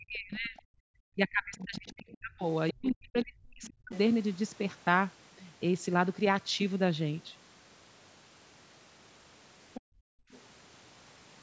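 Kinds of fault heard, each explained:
Speech suppressed in double talk: with both sides talking, the echo canceller likely ducked the microphone, cutting speech by about 40 dB up to 3.92 s.
Other side's voice leaking through: loudspeaker echo the canceller likely missed comes through faintly, about 20 to 30 dB down, at 1.61–2.17 s and in brief scraps later.
Background gated by the echo canceller: the canceller clamped the microphone while the loudspeaker played, so room sound drops by about 40 dB from 9.81 to 10.31 s.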